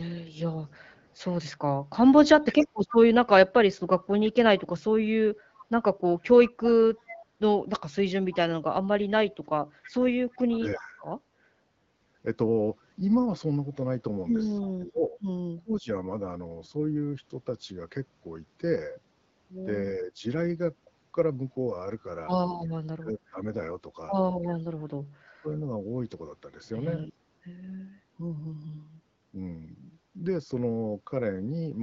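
An echo leak, most likely from a far-end echo canceller failing to remove loudspeaker pickup, runs from 0.66 to 10.56 s: a copy of the speech returns 325 ms late, about 20 dB below the talker. During that stretch, speech suppressed in double talk, likely as the canceller mistakes overlapping talk for echo, drops the voice by roughly 35 dB for about 0.3 s between 2.53 and 2.87 s, then by roughly 15 dB from 10.55 to 11.05 s. The echo leaks briefly again at 14.62 to 14.71 s, about 25 dB down. Suppression then returns from 14.74 to 15.91 s and across 19.98 to 25.46 s, each time cutting the talker by up to roughly 25 dB in dips that add up to around 0.7 s.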